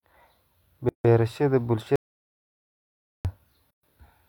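At 0.89 s the speech stops dead for about 156 ms, then resumes where it left off. This is a gap at a join of encoded pieces, where encoder delay and end padding were left untrimmed. From 1.96 to 3.25 s there is an audio dropout to silence lasting 1.29 s. The signal falls to silence with no room tone, likely because the input was lost. At 3.71 s a second join gap of about 128 ms opens, with smeared edges.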